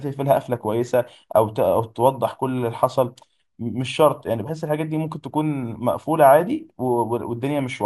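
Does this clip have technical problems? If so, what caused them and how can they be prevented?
Yes, throughout the speech there's imaging from sample-and-hold upsampling: repeated samples leave a mirrored copy at 12 to 24 kHz, about 28 dB down, which fits a 24 kHz source raised to 48 kHz. Use a proper interpolating low-pass resampler instead of sample repetition.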